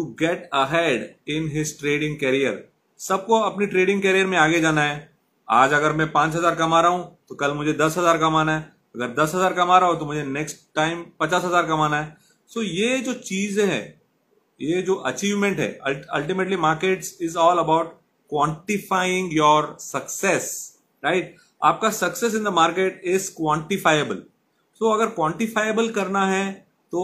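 No technical faults can be heard.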